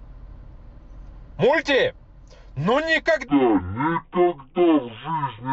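Stereo read as mono affects this speech clip from 3.28 s to the end. The alternating left and right samples are played back one after another as a single channel, so the audio runs at half speed and drops an octave (12 semitones).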